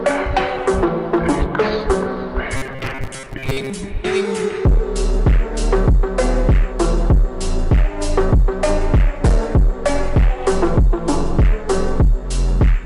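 From 2.57 s to 3.70 s, audio is likely arriving too seldom, so the playback side fills the gaps by replaying a very short stretch of the last buffer while the real material in between is dropped, with roughly half of this stretch being repeats. This is robotic sound from repeated short buffers: the loop of about 7.5 ms imposes a fixed 133 Hz buzz, turning the sound rigid and metallic while its broad shape still comes through.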